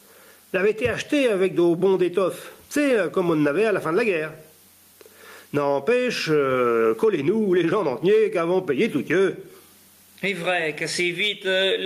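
Gain pumping runs through the whole clip: the level ducks sharply under each loud sound, a swing of about 15 dB. It is likely caused by input gain set far too high with a fast limiter clamping every peak. Loud and soft passages sit squashed close together in level.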